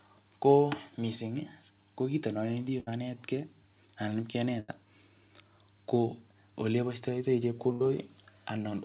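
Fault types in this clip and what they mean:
Burst of packet loss: three short dropouts, at 2.80, 4.60 and 7.72 s, each about 0.1 s long, where consecutive lost packets left 60 to 80 ms of speech missing. The receiver stretched the last sound across each gap while fading it, heard as a brief held buzz or hiss before speech jumps ahead. Spectrogram: flat, repeated harmonic bands dimming out below the 4 kHz band edge. Waveform: a periodic, shrinking envelope, then an abrupt restart.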